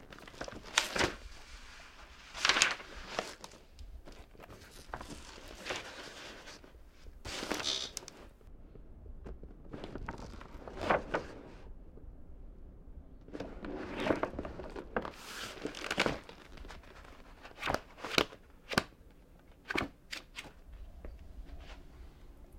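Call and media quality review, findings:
De-emphasis applied wrongly, 8.47–15.11 s: treble-cut filter on un-emphasised or already de-emphasised signal. Smooth high-frequency roll-off, about 11 dB down at 10 kHz relative to 1 kHz; sound dull, muffled.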